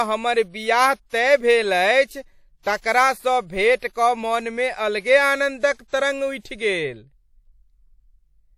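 WMA compression is plainly audible throughout this speech recording, with a ringing, washy hiss that breathes with the signal and nothing above 18.3 kHz. The likely cause is a transform codec zeroing weak spectral lines and spreading quantisation noise across long blocks, which fits a bitrate around 48 kbps. Pre-echo appears from 5.73 to 5.79 s and again from 5.88 to 5.93 s, as a short hiss of 59 ms and then 48 ms ahead of each sharp attack, which sounds smeared. Each attack fell late in a block, so noise sized for the loud onset also filled the quiet moment before it.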